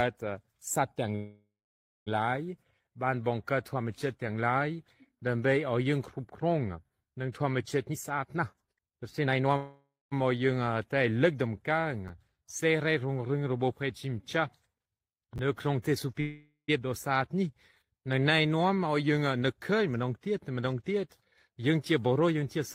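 At 1.15 to 2.09 s the sound stops and a fading buzz fills the gap, ending in roughly 540 ms of silence before it resumes where it left off. This is a call audio freeze, likely from packets held up until the jitter buffer ran dry. About 911 ms of delay is added and nothing is lost.

From 7.90 to 9.54 s a jitter buffer speed-up plays the audio at 134% of normal speed with unchanged pitch, so it sounds hurried. The receiver cuts short pitch-period pieces, roughly half a second in total, to drain the excess buffered audio.

Another freeze follows at 9.57 to 10.13 s, adding 549 ms with about 190 ms of silence.

Chunks out of order cause brief jumbles at 12.08 to 12.10 s and at 15.36 to 15.39 s. In each, a 10 ms chunk plays late, by one chunk and then by two. The reordering creates hard joins.

A third freeze at 16.20 to 16.70 s inserts 478 ms, of which about 80 ms is silent.

From 18.70 to 22.58 s a milder speed-up runs at 107%, trimming roughly 0.3 s.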